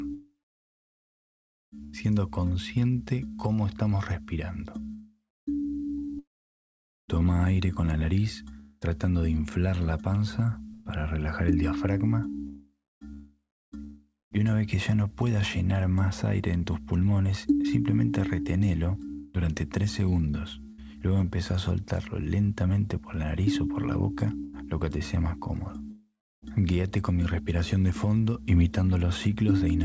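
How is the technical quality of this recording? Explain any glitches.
The recording has repeated dropouts where real sound gives way to synthetic background hiss, and it sits on a wideband call path whose content stops at 8 kHz, consistent with G.722 at around 64 kbps. The glitches are sound chopped by the voice detector, at 0.14–1.96 s (about 1.67 s replaced), 4.93–14.40 s (about 3.36 s), 19.13–20.81 s (about 0.27 s) and 24.44–26.45 s (about 0.6 s). The sender's voice detector likely kept gating transmission off, substituting comfort noise, so quiet edges vanish. On a waveform, the gaps appear as flat, low-level noise bands. A spectrogram shows smooth, featureless noise patches interrupting the detailed texture.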